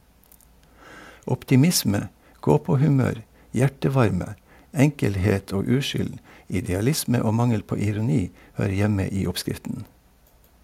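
No technical faults are audible anywhere in the speech.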